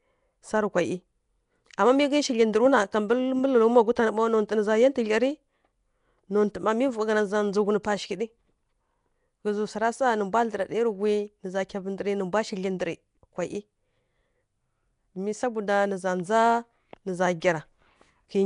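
Nellymoser compression runs through the whole clip, most likely from the Flash-era Nellymoser Asao codec at a rate the sound suggests is near 44 kbps. Its coarse fixed bit budget per block leaves plainly audible damage: a rough, hissy halo, a smeared underwater quality, and nothing above 10.6 kHz.

Pre-echo appears at 7.83 s, just before "pa shighǝɗǝ". A sharp attack landed late in a coded block, so quantisation noise sized for that loud onset spread across the quiet moment before it, giving about 12 ms of hiss and a softened, smeared attack.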